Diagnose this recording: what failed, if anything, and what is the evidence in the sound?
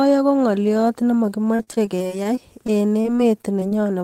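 The network is what failed here. From about 1.55 s to 3.73 s the speech turns choppy and robotic, which is repeated packet loss (robotic sound). There are about fifteen short holes, none longer than about 39 ms. Each one gets papered over by stretching the last bit of sound. Roughly 14% of the stretch is concealment, and some audio is simply gone.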